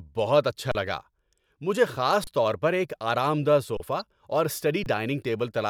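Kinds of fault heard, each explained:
Underrun with held sample: the speech briefly freezes four times, going flat at a steady level. This happens at 0.72 s just after "بہت اچھا", and at 2.24 s, 3.77 s and 4.84 s, each hold lasting about 23 to 35 ms. The output buffer ran empty and the converter held its last sample. About 20 to 30 ms of live audio was lost during each hold.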